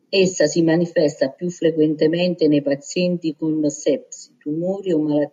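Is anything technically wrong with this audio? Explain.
No, the speech signal shows no technical faults at any point in the recording.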